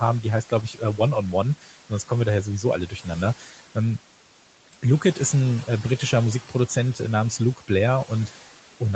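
Noise suppressor artifacts run through the whole clip. The suppressor pulls down bands it judges to be steady noise by about 12 dB, so the background dips in the gaps and swells back under speech, rather than holding as a constant hiss or cutting like a hard gate.

Speech cut by the noise suppressor happens at 0.43–0.99 s, 1.61–1.91 s, 2.87–3.07 s and 3.38–3.76 s. In each stretch, a fraction of a second of quiet speech is mistaken for noise and sinks by about 10 to 12 dB. Endings and soft consonants go faint and swallowed rather than breaking off in a dropout.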